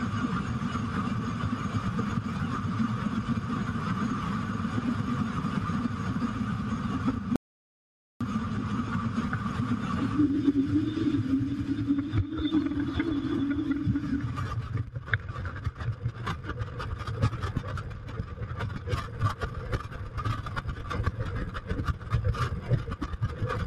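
Throughout the clip, a noise suppressor applied to music or sounds built for speech keeps treating sustained tones and decay tails as noise, pulling them down by about 5 dB while onsets pass. Unlike ordinary compression, the level follows tonal steadiness rather than loudness, so held material thins and flutters.

From 7.36 s to 8.21 s, an audio dropout to silence removes about 0.85 s. The gap is silent with no background left, which separates it from a gate or fade. The likely cause is lost input while recording continued.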